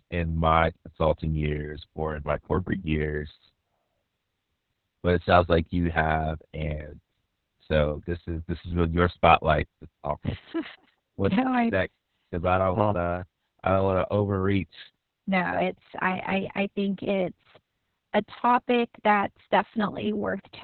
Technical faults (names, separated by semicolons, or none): Opus voice compression